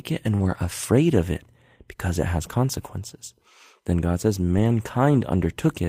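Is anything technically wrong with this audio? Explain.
Yes. From 0.35 to 0.41 s there is short concealed packet loss: about 40 ms of audio never arrived, and the receiver extended the preceding sound to bridge it, leaving a brief smear.

There are three spots of lost packets rebuilt from error correction: 0.39 to 0.57 s, just before "afraid of"; 1.31 to 1.37 s, between "afraid of" and "because it has consequences"; and 4.51 to 4.69 s. Each time the decoder played the low-bitrate copies carried by the following packets, so nothing drops out, but those stretches (about 100 ms, 40 ms and 100 ms) sound rougher and noisier.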